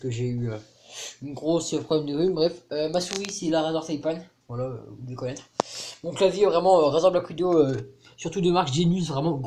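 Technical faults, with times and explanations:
No technical faults can be heard in this clip.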